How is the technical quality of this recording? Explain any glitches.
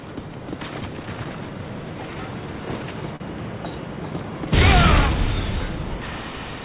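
There is one glitch, and the audio passes through a narrowband call path with nothing above 4 kHz, which fits G.711 telephone coding. The glitch is a short stall from a late packet, from 3.16 to 3.23 s. A packet arrived late, and the jitter buffer ran dry. The receiver stretched the last bit of sound for about 40 ms to cover the gap. When the packet came, playback resumed where it stopped. No sound is lost. You hear a brief hold with a slight buzz or dip, and everything after runs 40 ms later.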